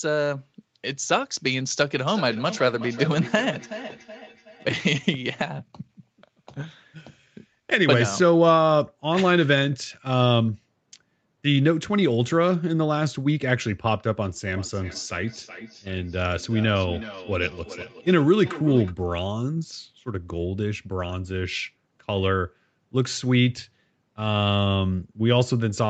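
From 2.08 to 4.71 s and 14.48 to 18.95 s, a second device replays the call into the microphone. This feedback echo between two devices returns each word roughly every 0.4 s, thin and ringing, peaking about 14 dB below the speech, as faint evenly spaced copies on a spectrogram.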